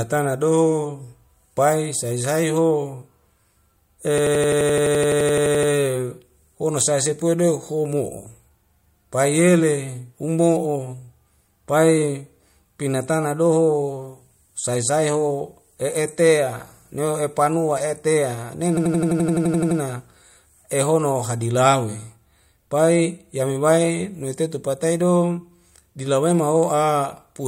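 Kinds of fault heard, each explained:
System hang loop: The playback system stalled while the sound hardware kept replaying its ring buffer. In this speech clip one 85 ms slice repeats exactly, about 11.7 times a second, which fits a 4096-sample buffer. At that length it sounds like a machine-gun stutter, not a buzz. It happens twice, from 4.18 to 5.72 s and from 18.77 to 19.80 s. Little or no speech seems lost afterwards.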